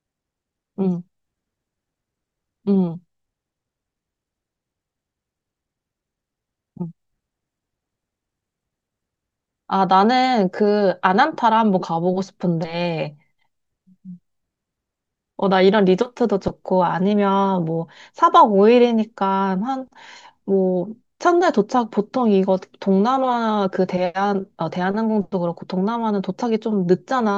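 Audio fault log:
No technical faults can be heard; the speech signal holds a steady, intact state throughout the recording.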